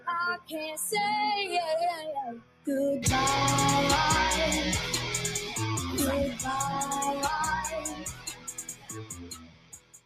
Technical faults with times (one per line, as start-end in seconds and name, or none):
0.00-10.06 noise suppressor applied to music or sounds
0.37-0.54 sound cut by the noise suppressor
2.35-2.67 sound cut by the noise suppressor
7.76-10.06 sound cut by the noise suppressor